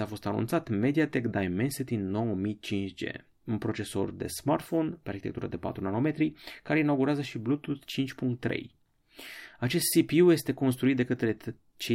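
Listening to this speech recording, nothing technical stood out as wrong at any point.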